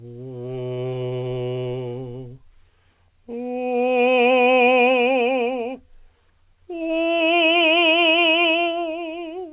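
At about 0.74 s the music hits a short stall from a late packet. A packet didn't arrive on time, the jitter buffer ran dry, and the receiver stretched the last bit of sound for roughly 32 ms until it showed up, finishing around 0.79 s. Nothing actually goes missing. The music just hangs for a moment with a slight buzz or dip, then picks up exactly where it left off, about 32 ms later than before. All of it sits in the call path's narrow band, with nothing above 4 kHz, which fits G.711 mu-law.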